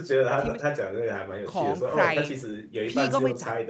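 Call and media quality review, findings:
No faults found in the speech. Content stops at about 8 kHz, consistent with the microphone processing and an Opus call path at wideband settings.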